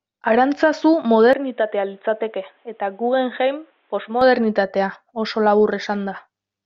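At 1.33 s the sound abruptly turns dull and boxy, with no gap at the change. Nothing above 3.9 kHz comes through. The level drops by about 5 dB. A new noise floor appears, roughly 45 dB below the speech. At 4.21 s the full, brighter sound returns just as suddenly. This is likely an input switched to a poorer device mid-recording. A narrower-band microphone or headset call profile would give exactly this muffled, quieter stretch.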